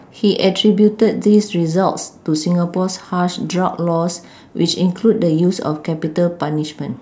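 No technical faults detected.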